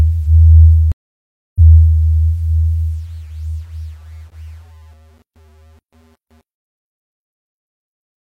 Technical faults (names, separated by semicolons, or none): stream reconnect